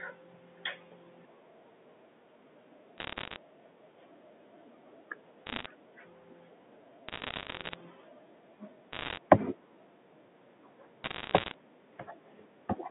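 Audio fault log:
2.98–3.36 s, 5.46–5.66 s, 7.08–7.75 s, 8.93–9.18 s and 11.04–11.54 s: bit errors on a digital phone line. Around 0.7 to 1 bit in a hundred flips, each corrupting a single mu-law sample; sign or high-bit hits cause sharp ticks, heard as bursts of crackle over the telephone-band speech.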